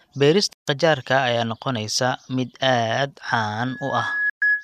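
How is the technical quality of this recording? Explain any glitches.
The recording has two kinds of technical fault: short digital broadcast dropouts and a loudspeaker feedback squeal at the end.

Digital broadcast dropout, 0.53 to 0.68 s and 4.30 to 4.42 s: the receiver stopped getting valid frames and muted until good data returned. The first gap of 144 ms fits six lost frames, and the second of 120 ms fits five. Each time the speech fades to silence within about 3 ms, so it sounds like an abrupt cut rather than a gentle dip. The first resumes on "qajaarka ayaa", and whatever was broadcast during each hole is gone.

Loudspeaker feedback squeal, 3.63 s to the end: a microphone began picking up the loudspeaker it feeds, and at 1.7 kHz the loop's gain passed one, so that tone fed on itself. It swells over roughly the first 0.7 s into a steady whistle sitting a few decibels above the speech and is still sounding when the clip stops. 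The second dropout punches a brief silent hole through it.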